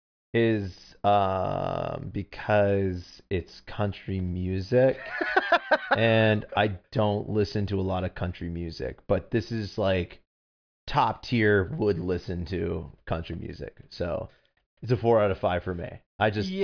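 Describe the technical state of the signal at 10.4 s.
At 10.4 s the speech signal is intact, with no technical fault audible at that moment.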